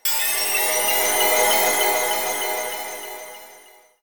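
No technical faults are audible.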